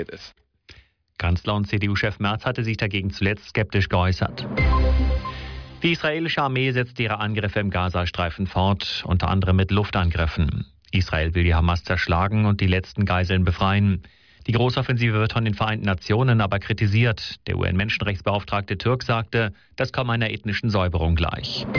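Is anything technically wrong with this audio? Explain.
No, nothing is technically wrong with this audio.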